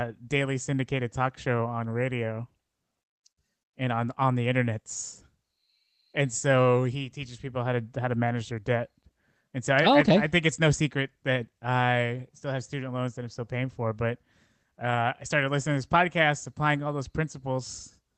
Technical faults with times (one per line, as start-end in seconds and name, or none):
none